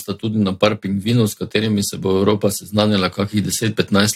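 Nothing in the speech stood out as a technical problem on listening.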